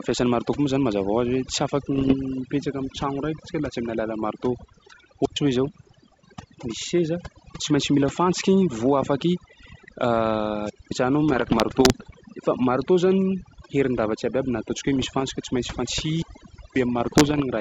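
Throughout, the background sinks to near silence dotted with twinkling specks. This is overdone noise removal: the reducer was set so hard that it cuts frequency bands lying near its noise estimate, taking quiet parts of the speech with them.

From 1.94 to 2.15 s there are pops and rough, crackly bursts with brief level jumps. These are bit errors on an ADPCM link. Each flipped bit also throws off the decoder's step size and predictor, so the damage rings on for some milliseconds.

At 5.22 s a squelch dropout brings a short rise of hiss and then a hole of about 109 ms before the sound returns. The same ADPCM bit-error roughness comes back from 5.64 to 5.95 s.

A second wireless microphone squelch dropout at 10.63 s mutes for about 218 ms. The radio signal faded until the receiver's squelch shut the output.

The longest ADPCM burst runs from 11.32 to 12.16 s, with errors on the order of one percent of bits. 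Another follows from 14.96 to 15.24 s.

At 16.09 s the squelch closes for 539 ms, and bit errors crackle again from 17.00 to 17.42 s. Underneath all of this, the G.722 wideband coding keeps its clear top end up to about 7 kHz.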